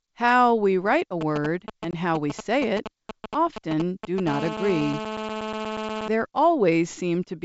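A nearby 2G handset exchanging signalling bursts with its network gets its radio pulses rectified by the audio circuitry of this G.722 wideband speech clip, whose coding itself shows at most faint damage. From 1.21 to 4.29 s this injects GSM signalling bursts: galloping groups of short 217 Hz buzzes, roughly 5 dB below the speech. Within that stretch, packet loss on the ADPCM call blanks about 20 ms around 1.91 s, which fits a couple of lost packets. The hard-edged hole leaves the decoder's predictor and step size out of step with the sender's, so the speech comes back slightly distorted. When the handset enters a call at 4.29 s, its transmission becomes a steady train of bursts 217 times a second, and GSM phone buzz follows until 6.08 s: a steady, raspy 217 Hz tone rich in harmonics, about 7 dB below the speech and unrelated to it.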